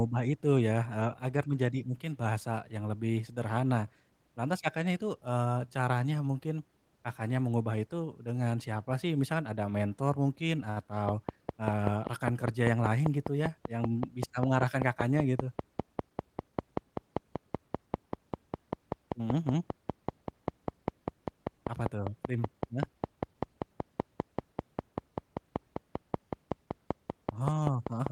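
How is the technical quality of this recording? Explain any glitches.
The recording is compromised by a steady train of clicks through its last seventeen seconds. From 11.09 s to 28.08 s, regular clicks at about 5.1 per second, roughly a hundred in total, tick over the speech and the pauses, peaking about 20 dB above it. The even spacing likely points to periodic interference or a faulty connection or power supply injecting pulses.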